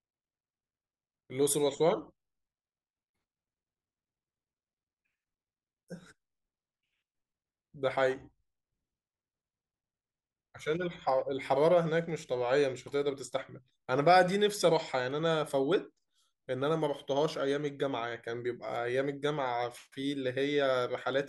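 Clock drift buffer slips, 1.52 to 21.13 s: the speech carries a regular click every 1.51 s, likely from two unlocked clocks roughly 100 ppm apart slipping a few samples.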